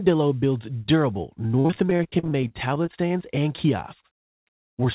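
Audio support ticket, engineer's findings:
Repeated packet loss (robotic sound), 1.57 to 4.18 s, in the speech. Frequent short holes patched by extending prior sound, gaps up to 44 ms, roughly 15% concealed. Nothing above 4 kHz, consistent with a narrowband 64 kbps call codec.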